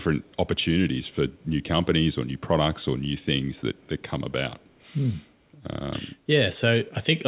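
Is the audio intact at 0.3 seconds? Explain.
No. From 0.26 to 0.36 s a faint echo leak trails the speech by about 183 ms. A loudspeaker echo likely slipped past the far end's echo canceller.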